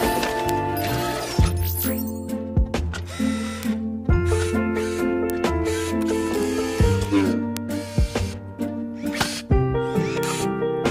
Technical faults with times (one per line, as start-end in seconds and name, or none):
0.49 bit error spike
3.63 bit error spike
5.30 bit error spike
7.57 bit error spike
10.23 bit error spike